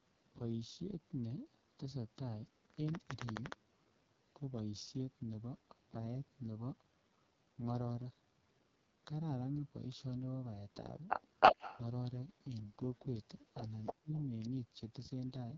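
Throughout, the speech carries the AMR wideband (HD Voice) codec at heavy damage. The sound is rough and raspy, and nothing is present above 7.5 kHz. This points to the codec's lowest rate, 6.6 kbit/s, where the vocal tract model falls apart.

From 11.4 to 11.81 s, an echo leak is heard. A delayed copy of the speech returns about 322 ms late. It is strikingly loud, well above the speech itself. A far-end loudspeaker echo that slipped past the echo canceller is the likely cause. A second leak follows from 13.69 to 13.93 s, somewhat quieter than the speech. A third, from 14.16 to 14.26 s, is faint.

Between the second and third leaks, from 13.92 to 14.13 s, the speech is suppressed in double talk. The level plunges sharply, by roughly 35 dB at its deepest, for about 200 ms in total. Both sides probably talked at once, so the canceller ducked the talker along with the echo.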